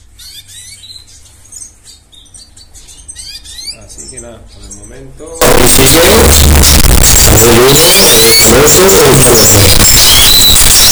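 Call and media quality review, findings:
Signed and unsigned mixed up, 5.42 s to end. Sudden very loud, harsh distortion; quiet passages as loud as loud ones. Likely 16-bit samples read with wrong signedness, top bit flipped, so every zero crossing jumps across the whole range.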